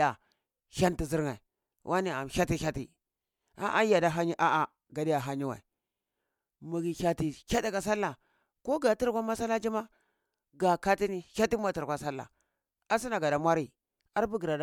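No technical faults are audible.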